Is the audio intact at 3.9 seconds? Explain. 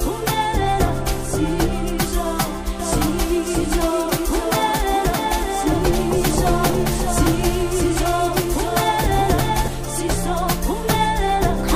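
No. At 3.9 seconds the sound carries a doubled audio track, running from 2.80 to 9.68 s. The likely cause is the same signal reaching the mix a second time through a slower path, or an edit leaving two copies out of step. A full-band copy trails the original by roughly 0.7 s at about 5 dB lower, with no decay or room colouring. It cuts in and drops out abruptly at the span's edges.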